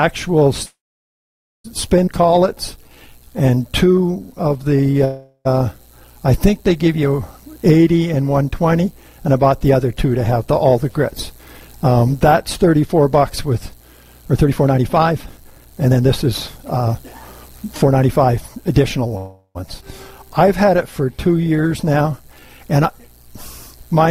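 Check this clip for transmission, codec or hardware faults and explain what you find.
The clip has four kinds of network-related timing fault: repeated freezes, two forward skips, two slowed stretches and one long sped-up stretch.

Call audio freezes occur at 0.65–1.66 s, 5.05–5.47 s and 19.17–19.57 s. The sound stalls, with a brief fading continuation and then silence: about 0.89 s of it in the first, about 60 ms in the others. Playback resumes where it stopped, so nothing is lost. This is likely from delayed packets emptying the jitter buffer. Unlike a skip, it inserts a gap rather than removing audio.

Skip ahead events come at 2.06 s and 19.81 s. Roughly 0.7 s and 0.3 s of audio vanish, and the two sides are butted together with only a few milliseconds of join. That stretch was dropped in transit or by an overflowing buffer while later audio was already waiting. Unlike a freeze, there is no pause, just an abrupt jump.

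Jitter buffer slow-down runs over 2.21–4.99 s and 20.18–22.48 s, at 89% speed. Repeated pitch periods stretch these passages by 318 ms and 252 ms to rebuild a reserve. Pitch stays unchanged, which separates this from a tape-style slowdown. Sounds become drawn-out.

Jitter buffer speed-up spans 10.65–19.07 s, at 112% speed. Trimming short pitch-period pieces removes about a second to shed excess delay. The audio sounds hurried at unchanged pitch. Unlike a skip, the shortening is spread thinly across the stretch rather than taken in one cut.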